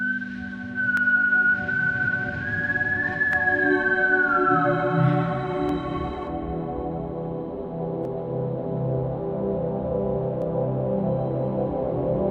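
A recording of everyday sounds with a regular click about every 2.36 s from 0.97 s to 10.42 s, around five in all. It's likely clock drift buffer slips: two devices off by something like 150 ppm, with each slip dropping or repeating a small block of samples.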